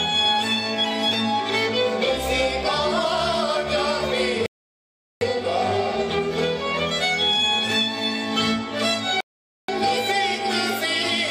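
At 4.46 s the audio stops dead for 0.75 s, and at 9.21 s for 0.48 s: rebuffering stalls, where playback outran the download and waited. Unlike a dropout, nothing is skipped. The sound resumes exactly where it broke off, only later.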